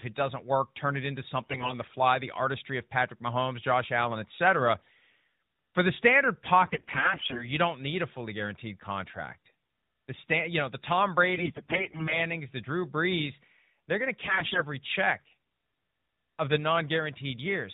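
AMR bit errors strike four times, at 1.42 to 1.74 s, 6.66 to 7.51 s, 11.34 to 12.18 s and 14.22 to 14.62 s. Weakly protected bits in the mobile speech frames arrive corrupted, worst in the middle two bursts. The excitation pulses and the finer gain and spectral values are decoded wrongly. Pitch and loudness roughly hold, but the speech turns hoarse, scratchy and gargly. Between bursts the narrowband codec sounds consistent with its 12.2 kbps mode.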